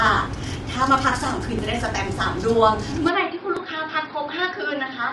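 From the start, the speech is rough and grainy. Noise fills the gaps between the harmonics. Nothing is heard above 11.6 kHz. This is plainly audible codec damage, likely from low-delay AAC compression. That codec works in very short frames, so it separates pitch harmonics poorly and spends bits inefficiently. The coarseness fits a low bitrate of around 32 kbps.

At 1.59 s there is a brief skip. The sound jumps forward with no gap. This is likely a dropped buffer from an overrun. The software failed to fetch its samples before the hardware overwrote them. A tiny slice, a millisecond or two, is lost, and the two sides are butted together.

At 3.09 s the tone suddenly changes and stays changed to the end. The sound turns dull and boxy. The level drops by about 5 dB. A new background hiss sits about 35 dB below the speech. There is no silence at the change. This is likely an input switched to a poorer device, with narrower bandwidth, its own noise and a lower gain.

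At 3.57 s a second skip is heard, inside the duller section. It is likely another dropped buffer from an overrun. Again a millisecond or two is lost and the ends are joined directly.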